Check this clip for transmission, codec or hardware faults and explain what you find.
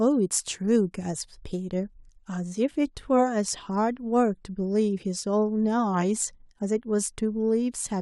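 Nothing wrong can be heard in this speech recording.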